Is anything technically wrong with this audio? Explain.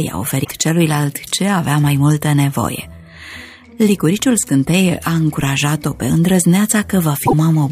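Yes. Damaged data in a compressed stream appears at 0.41–0.51 s and again at 7.22–7.33 s. Corrupted bytes make the decoder misread frames and hunt for the next valid header, producing a brief chirp, squawk, click or short hole.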